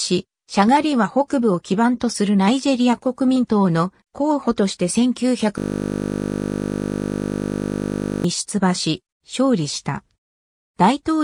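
From 5.58 to 8.24 s a system hang loop takes over: the machine stalled while the audio hardware kept replaying one 20 ms buffer, giving a steady 50 Hz buzz. Unlike mains hum, it replaces the sound entirely and stops abruptly.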